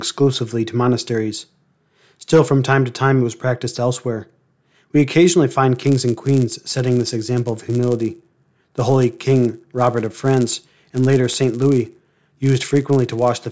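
From 5.75 s, right after "occasionally find", to the end at 13.51 s, there's a buzz at 100 Hz riding on the speech. That's the resampler restarting on every block: each 10 ms block went from 48 kHz to 16 kHz without its neighbours, so every block edge leaves a small error.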